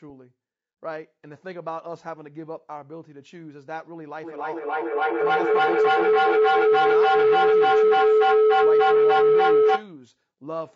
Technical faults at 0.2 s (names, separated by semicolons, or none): low-delay AAC compression